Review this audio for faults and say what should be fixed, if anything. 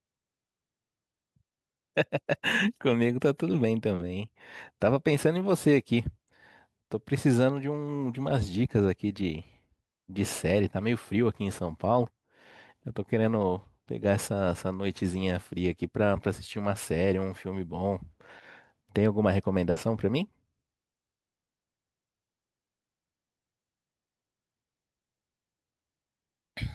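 At 3.95 to 4.05 s, short concealed packet loss: 40 ms of speech never arrived, and the receiver extended the preceding sound to cover it, adding about 10 ms. On a spectrogram the preceding sound smears across the gap. A larger jitter buffer would let late packets arrive in time.

At 19.71 to 19.79 s, a burst of packet loss: 60 ms went missing in a row, so the concealment held the last sound and faded it down before the speech resumed further on. The spectrogram shows a frozen, dimming band with an abrupt restart, and the waveform envelope tapers then jumps. Forward error correction or redundant packets would let the receiver rebuild such runs instead of guessing.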